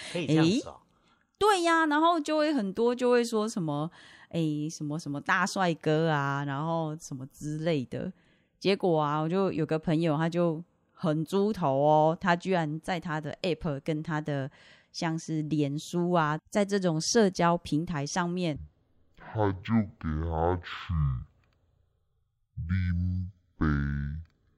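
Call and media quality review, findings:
Stereo read as mono, 18.56 s to end of clip. Speech drops to half speed, an octave low. Probable component: decoder or file reader channel configuration. Interleaved left/right samples consumed sequentially as one channel. Spectrogram: harmonics compressed to half spacing, faint mirrored copy in upper half of band. Waveform: stretched envelope, syllables twice as long.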